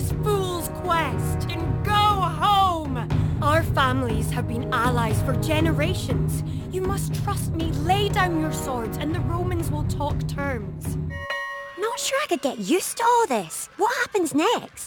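Crude rate conversion runs throughout: samples were dropped, which fits 48 kHz to 44.1 kHz, leaving a gritty inharmonic fizz roughly 25 dB under the sound.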